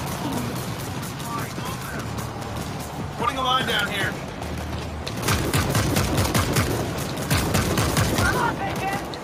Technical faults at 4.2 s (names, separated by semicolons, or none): none